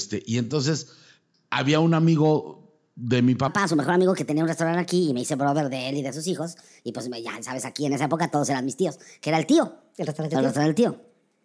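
Wrong sample rate from 3.48 s to the end: the audio is played back faster than it was captured, with no conversion. Speed rises 1.38 times and pitch climbs 5.55 semitones, making the speech sound high and hurried, which fits 16 kHz material played at 22 kHz.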